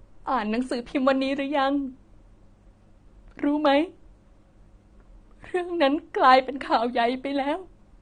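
From the start to the end of the clip, the speech is dull and smeared, with a warbling, fizzy texture on sustained vowels and sibilants and the top of the spectrum plainly missing. This is the sound of AAC compression, likely AAC-LC at a low bitrate, and the damage fits roughly 32 kbps. At that rate the encoder lowers its cut-off and quantises frequency lines coarsely, leaving spectral holes and noise-filled bands in place of detail.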